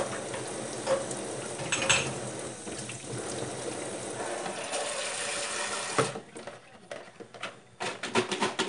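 From start to finish the audio carries 4-bit ADPCM compression, plainly audible as a gritty hiss that rises and falls with each loud sound, plus roughness on sharp attacks where the coarse steps lag behind. Nothing reaches above 10.6 kHz, which fits a sample rate near 22 kHz and a data rate around 89 kbps. A spectrogram would show level-tracking broadband noise under every event and a hard ceiling at 10.6 kHz, while the waveform looks slightly stepped on fast transients.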